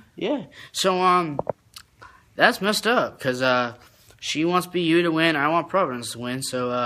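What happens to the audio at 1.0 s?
Nothing goes wrong at 1.0 s, and the audio plays through that moment intact, with no dropout, click or distortion.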